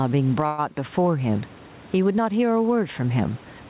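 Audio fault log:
throughout: gain pumping. Loud and quiet passages sit unnaturally close together, and the speech sounds squashed, with a level swing of around 10 dB. This likely comes from the input gain being set far too high and a fast limiter or compressor clamping down on each loud moment. Behind this, the room noise sits about 33 dB below the speech, and the sound stops at 4 kHz as the telephone-band codec on the call path would leave it.
0.46 to 0.74 s: call audio freeze. The speech stalls briefly and its last sound is stretched out as a short, fading continuation lasting about 0.12 s. The speech then resumes exactly where it left off, so nothing is cut out but the timing is pushed later. This is likely a brief hold-up of packets in transit that let the receiver's jitter buffer run dry, with the receiver filling the wait by extending the last sound until the data arrived.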